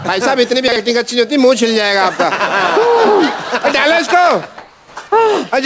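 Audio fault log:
0.68–0.76 s, chunks out of order: a 40 ms chunk landed one chunk late, so it plays after the piece that should have followed it. Nothing actually goes missing, but the order is swapped across that short stretch, leaving three hard joins, and the audio sounds briefly scrambled, a quick jumbled hiccup rather than a dropout. The band topping out at 8 kHz fits a G.722 call path at 64 kbps.
4.58–4.96 s, comfort noise in place of the background: for about 380 ms the real background, which sits around 33 dB below the loud parts, gets swapped for a smooth, featureless hiss. The level barely moves, so it isn't a dip you'd notice; what changes is the texture, with the natural detail flattening out. That's likely discontinuous transmission, where the sender went quiet and the receiver filled the gap with synthetic noise.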